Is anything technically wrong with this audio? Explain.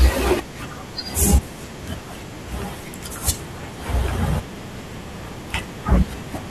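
No, nothing technically wrong can be heard here.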